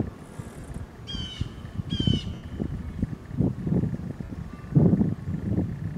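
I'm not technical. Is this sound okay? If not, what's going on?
No. There are three brief glitches where the sound turns into a short hissy smear: at 0.60 s for about 30 ms, at 2.34 s for about 90 ms (the longest, fading toward silence), and at 4.24 s for about 60 ms. These are lost LE Audio frames: chunks of the Bluetooth wireless signal never arrived, so the decoder filled each gap with a noisy copy of the last sound it had, letting it fade as the gap went on.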